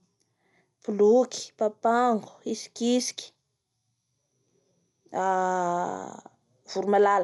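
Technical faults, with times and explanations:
Throughout: Dolby Digital compression. The speech sounds dull and has nothing above 11.4 kHz. A rough, fluttering noise clings to the voiced sounds, and the damage is plainly audible. The likely cause is AC-3 style coding at a low rate, which fits about 64 kbps. At that rate the encoder narrows the band. It also leaves many frequency lines without mantissa bits, so the decoder fills them with dither noise. That noise gives the grainy flutter.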